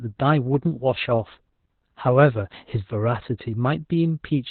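From start to finish the speech carries heavy Opus voice compression: everything above about 4.3 kHz is gone, so it sounds muffled, hoarse and a bit robotic, like a low-rate narrowband SILK stream.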